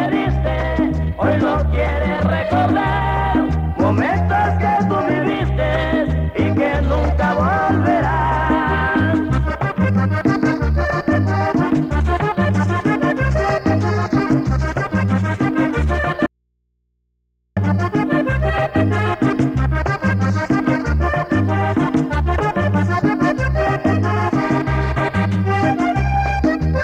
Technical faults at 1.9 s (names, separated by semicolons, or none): none